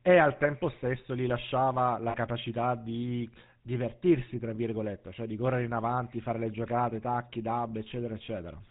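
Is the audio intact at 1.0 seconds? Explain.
No. At 1.0 seconds, as throughout the clip, the speech has passed through the GSM full-rate codec. The codec models the vocal tract and drives that model with a coarse train of regularly spaced pulses, keeping only a third of the excitation detail, and it drops everything above 4 kHz. The result at this point is a plainly audible buzzy, gravelly roughness over a dull, band-limited voice, which fits a 13 kbps GSM stream.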